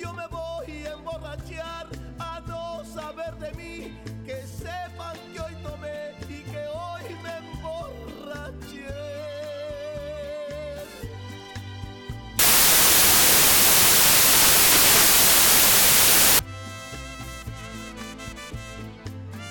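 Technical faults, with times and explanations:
12.39 to 16.39 s, samples built from the wrong bytes: for those four seconds the sample bytes get stitched together wrong, so the jittery low bits end up driving each value. What you hear is loud, harsh broadband noise, close to white on the louder sounds.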